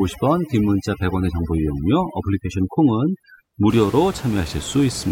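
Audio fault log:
0.00–3.70 s, overdone noise removal: a noise reduction stage set far too aggressively is cutting individual frequency bands down or out whenever they sit close to its noise estimate, and the room noise, about 14 dB below the speech, gives it plenty to chase. The background drops and breaks up into twinkling, chirpy specks, while the quieter parts of the speech are stripped along with it until the effect stops at 3.70 s.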